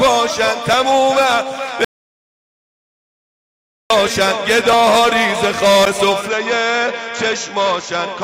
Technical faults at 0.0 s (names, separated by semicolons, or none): none